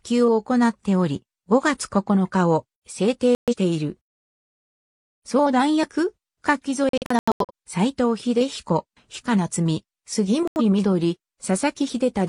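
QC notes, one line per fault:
3.35 to 10.61 s, digital broadcast dropout: the receiver lost the stream or rejected corrupted frames three times and muted until clean frames returned. At 3.35 to 3.54 s about 128 ms of audio is missing. At 6.89 to 7.51 s about 341 ms is lost in several short holes, the longest about 85 ms. At 10.48 to 10.61 s about 85 ms is gone. The sound resumes further into the programme, so those moments are skipped rather than delayed. On the waveform these show as flat, near-zero gaps. The spectrogram shows blank vertical bands across all frequencies.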